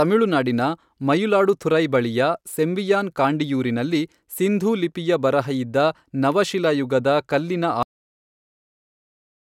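Cut-off end at 7.83 s: the speech stops abruptly right after "ಬರಹ ಇದ್ದ ನವಶಿಲಾಯುಗದ ಕಲ್ಲಿನ", in the middle of a sound, and the remaining 1.6 s up to 9.44 s is flat digital silence. The final stretch of audio was never written out or played back, so there is no natural decay or room tail. The signal doesn't fade. It simply vanishes at the cut point.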